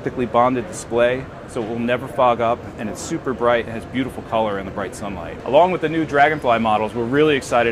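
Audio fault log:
No technical faults can be heard anywhere in this audio; the signal stays continuous throughout.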